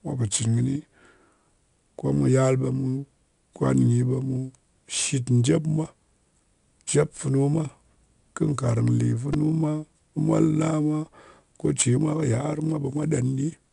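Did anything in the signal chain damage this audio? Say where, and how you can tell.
Yes. Two stages left marks on this speech. The codec stage is the first. Every louder passage carries a gritty hiss that rises and falls with the level, and sharp onsets sound roughened, as if the encoder cannot keep up. Nothing reaches above 10.6 kHz, so the sound is dulled throughout. This is 4-bit ADPCM compression: each sample is coded as a coarse step from a prediction, so the error scales with the signal. The bandwidth fits a codec running at about a 22 kHz sample rate.

The second is at the driver or buffer stage. At 9.34 s, just before "mwa molna mwa", there is a brief buzz, a tiny fragment hammered out several times in quick succession with hard joins. This is a repeated buffer. Fresh audio arrived late, so the device replayed its last block four more times. Each repeat lasts about 2.9 ms, which fits a 128-sample buffer and gives the buzz its pitch. 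Essentially no speech was lost; the delay was simply filled with copies.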